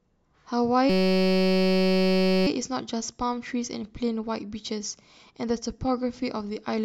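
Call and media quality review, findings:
Steady buzz near 188 Hz replacing the speech, 0.90–2.47 s. System hang loop: driver stalled, hardware replaying one 5.33 ms chunk, consistent with a 256-sample ring buffer.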